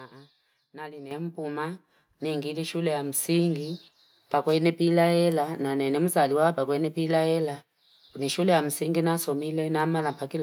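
At 1.11 s the microphone volume is stepped up. The level jumps by about 9 dB in a single step. The speech and the background noise rise together, so the whole sound gets louder at once. That shared jump points to the input volume of the microphone itself being raised, not to the talker moving closer. The call software judged the microphone too quiet and turned it up abruptly, without a gradual ramp.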